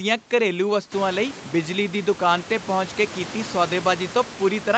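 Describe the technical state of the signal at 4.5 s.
At 4.5 s the speech is intact, with no fault in the signal at that moment.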